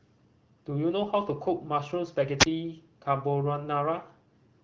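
At 2.39 to 2.45 s the speech suffers a wireless microphone squelch dropout. The radio link fades, hiss swells, and the receiver's squelch mutes the output for about 20 ms before the signal returns. A spectrogram shows a brief broadband haze, then a narrow blank column.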